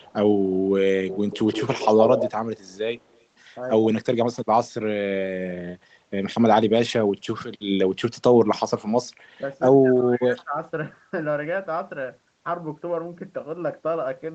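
Echo leak at 0.00 to 0.13 s, 0.99 to 2.33 s, 2.68 to 2.76 s and 2.97 to 3.24 s in this speech recording: a delayed copy of the voice trails by roughly 116 ms (157 ms in the first scrap). It is strong in the longest stretch and very faint elsewhere, likely because a far-end echo canceller let loudspeaker pickup through. Speech suppressed in double talk from 9.82 to 10.59 s: the voice dips by up to about 20 dB for roughly 0.7 s, likely because the canceller turned everything down while both sides spoke. The audio stops at 8 kHz throughout, as expected from the call path.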